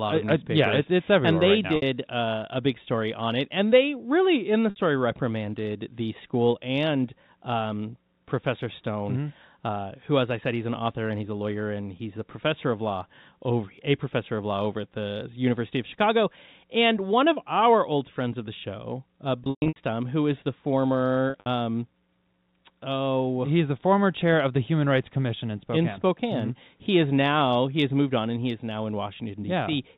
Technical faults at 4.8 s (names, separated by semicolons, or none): packet loss with pitch repetition